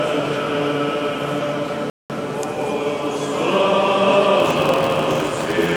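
A playback stall runs from 1.90 to 2.10 s, a silence of about 200 ms that cuts into the sound mid-flow before it picks up again. The most likely cause is the player starving for data or having its output thread held up, so nothing reached the output until it caught up.

A block size mismatch (padded) starts at 4.38 s and continues to the end. An upstream stage is writing blocks shorter than the downstream stage reads, and the shortfall in each block is filled with zeros. The repeated gaps produce a steady buzz at 86.1 Hz, which fits a 512-sample read. Because every block carries that padding, the audio plays back at 0.861 times normal speed with its pitch essentially unchanged.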